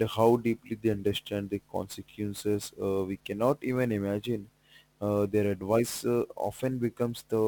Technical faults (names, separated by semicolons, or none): sample clock jitter